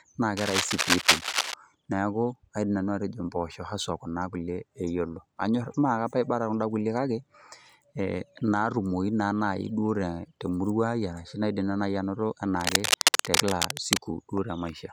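Cable scratch noise appears from 0.37 to 1.54 s and again from 12.60 to 13.98 s: dense, uneven bursts of scratching and rustling about as loud as the speech itself, likely from a worn cable or connector being moved so its contact resistance fluctuated rapidly.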